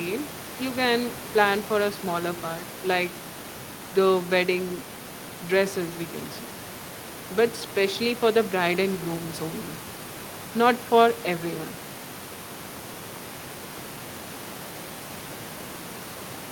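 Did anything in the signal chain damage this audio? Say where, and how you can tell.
No, nothing in the signal chain has damaged this speech recording, and the only background present is the room's own noise, sitting about 17 dB below the speech as part of the original acoustic capture.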